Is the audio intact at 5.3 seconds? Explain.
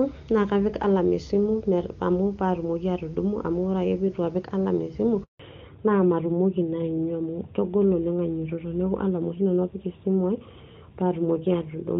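No. At 5.3 seconds the audio is inside a handover gap running from 5.23 to 5.39 seconds, about 160 ms. As the call switched networks, no speech frames arrived, so the sound fades within a few tens of milliseconds into silence. On a waveform this looks like a short flat line, and on a spectrogram like a blank vertical band.

When the audio resumes at 5.39 seconds, there is a fallback to narrowband, from AMR-WB at 23.85 kbit/s to AMR-NB at 12.2 kbit/s. Nothing above 4 kHz survives from then on, so the sound turns duller and rougher. A spectrogram shows a sharp ceiling at 4 kHz from that point to the end.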